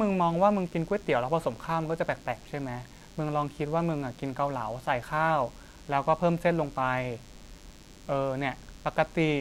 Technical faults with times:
0.00-9.40 DECT cordless phone buzz

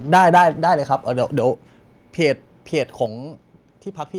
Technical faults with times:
0.13-0.43 microphone overload
0.38 microphone volume stepped down
1.38 microphone volume stepped down
3.06 microphone volume stepped down

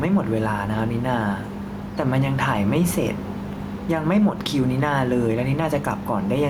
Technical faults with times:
0.00-6.49 gain pumping

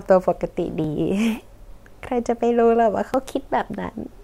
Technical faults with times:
0.84 dropped buffer (overrun)
3.14 dropped buffer (overrun)

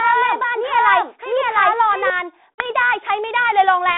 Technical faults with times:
0.00-2.10 doubled audio track
2.55-2.72 packet loss on an ADPCM call

